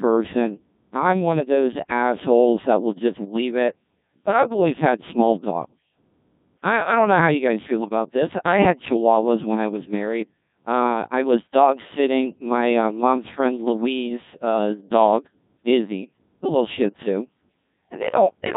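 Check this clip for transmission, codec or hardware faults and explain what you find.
Two faults are present: the whole clip has passed through a Codec 2 vocoder, and a brief burst of bit errors on digital voice radio hits at 7.80 to 7.90 s.

The Codec 2 vocoder damage runs throughout. The decoder rebuilds the speech from sine waves using only pitch, voicing, energy and a coarse spectral envelope, so the original waveform is gone. The speech sounds heavily robotic and buzzy, which fits a rate around 1.6 kbit/s. Unlike a lossy music codec's swirly artefacts, the damage here is synthetic buzz rather than smeared detail.

The bit errors last about 0.1 s, from 7.80 to 7.90 s, roughly two frames' worth. Flipped bits, at a rate of a few percent, corrupted the parameters the decoder uses to set pitch, level and tone colour for whole frames. The result is a sudden warbling bleep with jumping pitch. 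Unlike a dropout, the sound doesn't go silent.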